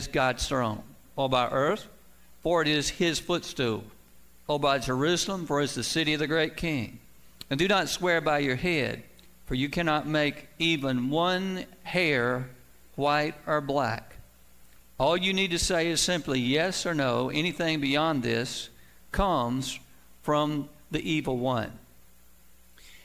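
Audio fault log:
Nothing stood out on listening.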